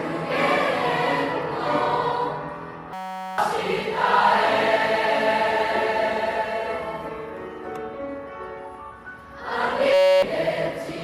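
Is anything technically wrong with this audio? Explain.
Yes. A system hang loop occurs at 2.93–3.38 s and again at 9.94–10.22 s. Each time, the output froze while the hardware kept replaying one 5.33 ms slice, which fits a 256-sample buffer. This produces a steady 188 Hz buzz that replaces about half a second and about 0.3 s of audio. A waveform shows an identical repeating cycle, and a spectrogram shows evenly spaced harmonic lines at multiples of 188 Hz.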